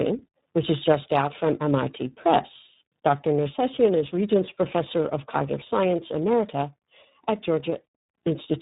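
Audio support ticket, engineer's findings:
Tandem speech coding, whole clip: rough, muffled, warbly speech, nothing above 3.8 kHz. Points to three speech codecs in series, G.726-like, ending iLBC-like, each re-encoding the last one's damage.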